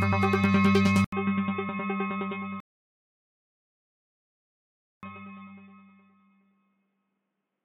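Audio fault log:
1.04–7.65 s, input switched to a poorer device (likely cause): after an 80 ms gap the sound turns dull and boxy, nothing above 3.8 kHz, about 10 dB quieter, with a faint new noise floor.
2.60–5.03 s, rebuffering stall: the sound goes silent for 2.43 s, then resumes exactly where it stopped. Nothing is skipped, unlike a dropout, which loses material.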